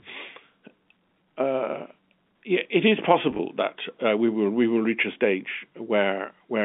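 Between 3.31 and 3.39 s, after "uh yeah it is" and before "that uh we will", the speech shows packet loss with pitch repetition. About 40 ms went missing, scattered across 80 ms in runs no longer than 20 ms, which fits several short packets. The receiver filled each gap by repeating the last pitch period, so the sound briefly holds with a slightly buzzy tone rather than dropping to silence or clicking, as a plain dropout would. The line's G.711 narrowband tone carries straight through it.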